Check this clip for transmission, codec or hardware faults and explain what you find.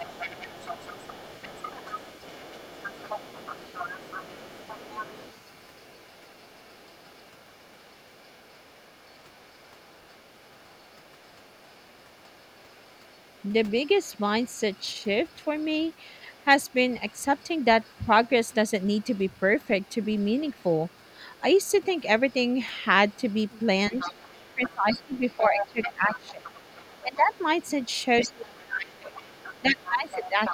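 Two faults stand out: the far-end voice leaks in, and near-end speech is pushed down when both sides talk.

Other side's voice leaking through: from 0.0 to 28.61 s a second voice sits about 20 dB under the speech, rising to about 15 dB under from 28.92 s to the end. It is likely loudspeaker echo the canceller left in the microphone signal.

Speech suppressed in double talk: at 23.9–26.56, 27.03–27.32, 28.27–29.15 s and from 29.6 s to the end, the main voice dips by roughly 15 to 25 dB. This is likely the canceller attenuating everything while both talkers overlap.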